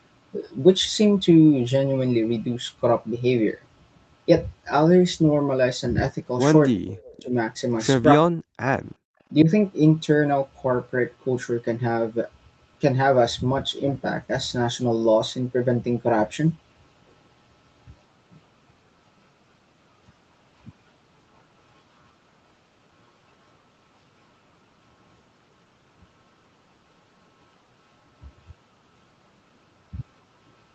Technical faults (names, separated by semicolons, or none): speech suppressed in double talk; echo leak; background gated by the echo canceller